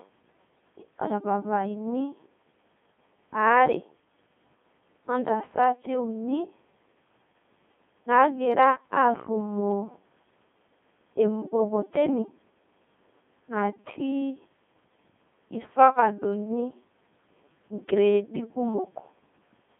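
Throughout, the speech passes through a Codec 2 vocoder, likely its 2.4 kbit/s mode, rebuilding the voice from sine waves within 150 Hz to 3.6 kHz, so it sounds heavily robotic and buzzy.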